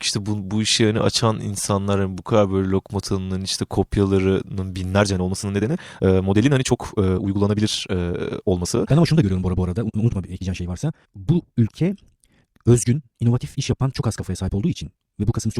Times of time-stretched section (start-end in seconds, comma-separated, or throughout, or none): 4.90-15.60